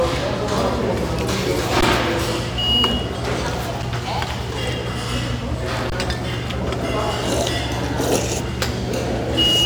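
At 1.81 s, 3.82 s and from 5.90 to 5.92 s the output shows an underrun with held sample. The buffer ran dry, and the converter held its last value, so the waveform freezes flat for 16, 5.3 and 21 ms. The 5.3 and 21 ms gaps fit buffers of 256 and 1024 samples. Roughly 15, 5 and 20 ms of live audio were lost.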